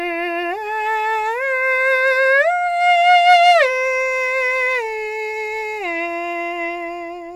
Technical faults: none

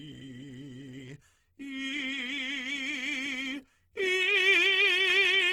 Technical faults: Opus compression

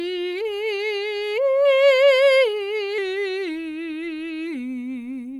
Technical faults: wrong sample rate

